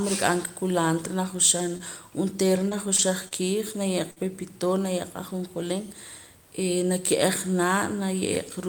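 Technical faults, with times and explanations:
1.77 to 4.18 s, scattered short gaps: about five lost packets, none longer than roughly 50 ms. Each hole was filled by extending the preceding sound, leaving brief ticks and smears before "pepitoria ajonjolín".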